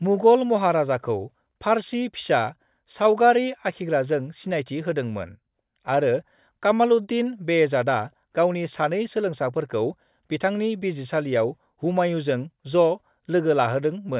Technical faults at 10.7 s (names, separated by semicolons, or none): none